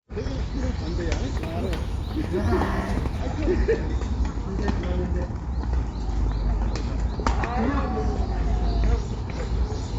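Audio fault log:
1.37–3.20 s, imaging from linear upsampling. The rate was raised from 16 kHz to 48 kHz by joining samples with straight lines, a weak filter. The top of the original band is dulled, and a faint mirrored copy fills 8 to 16 kHz, roughly 35 dB down. It adds a light metallic shimmer to high sounds.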